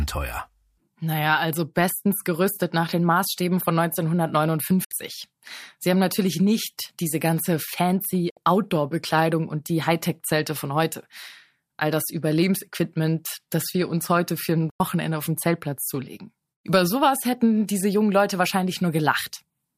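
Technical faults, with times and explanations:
4.84–4.92 s, 8.30–8.37 s and 14.70–14.80 s, digital broadcast dropout: the receiver lost good frames and muted. The speech snaps to silence through 3 ms fades for about 70, 70 and 100 ms, which fits two or three lost 32 ms frames. Spectrograms show blank vertical bands, and waveforms show flat gaps.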